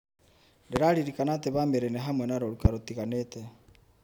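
A speech recording with two loud pops, at 0.76 s and 2.65 s, the second just after "nĩ hamwe na rũruka". Each is a single sharp transient lasting about 30 ms and peaking roughly 20 dB above the speech, which carries on unbroken underneath. The sound points to a brief voltage pulse added to the signal path, likely from a plug, switch, static discharge or driver glitch, which the downstream circuitry shaped into a short thump.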